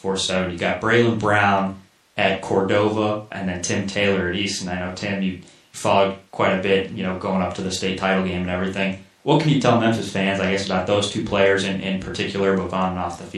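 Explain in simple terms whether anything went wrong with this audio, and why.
From start to finish, the speech has a plainly audible watery, swirly quality, with metallic chirping on s sounds and the starts of sounds smeared. The likely cause is MP3 compression. An MP3 encoder divides the sound into many narrow frequency bands and spends its limited data on what it predicts you'll notice. Weaker bands get dropped and then return from one moment to the next, and that flickering produces the swirl and chirp heard throughout.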